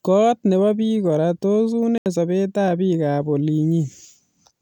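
At 1.98 s, after "kora tos", the speech goes silent for 80 ms, then resumes further on. A Bluetooth dropout of lost packets is likely.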